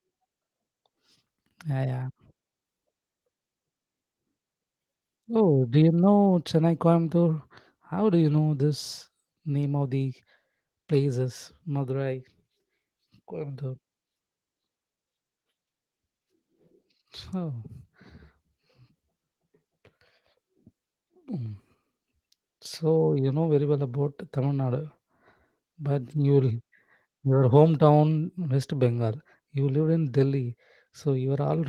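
No technical faults are audible.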